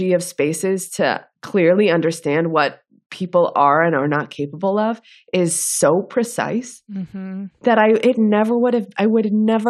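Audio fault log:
1.50 s to end, channel delay (comb filtering): one channel lags roughly a sample, so summing notches out around 20 kHz, dulling the top end.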